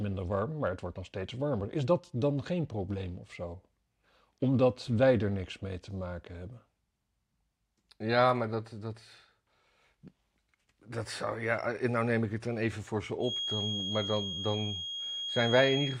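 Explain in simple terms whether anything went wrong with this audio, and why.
From 13.18 s to the end of the speech, a thin, steady 3.3 kHz feedback whistle sits just below the voice, swelling and fading slowly in level. The likely cause is a loudspeaker feeding back into the microphone, balanced right at the edge where one tone rings without growing.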